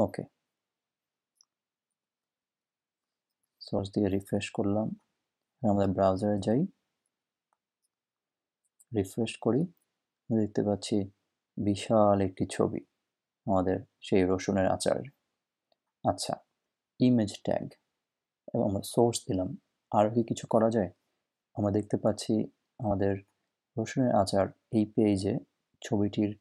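The audio skips forward four times, at 3.78 s, 11.61 s, 18.90 s and 22.90 s. These are compressed frames skipped. Whole blocks of coded audio never reach the output, so playback jumps ahead. The jumps at 3.78 s and 18.90 s lose about 50 ms, which fits two 26.1 ms frames. The other two lose roughly 30 ms, one frame.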